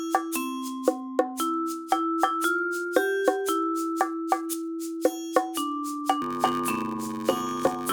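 From 6.21 s to the end, a block size mismatch (padded) sets in. Each 512-sample block is only partly filled and the remainder is zeros, giving a 93.8 Hz buzz at the block rate. The sound plays at 0.861 times normal speed, at roughly its original pitch.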